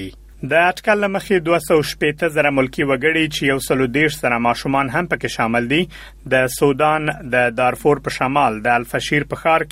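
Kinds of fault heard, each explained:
Nothing here calls for a fault label, since the audio runs along without any trouble worth pointing out.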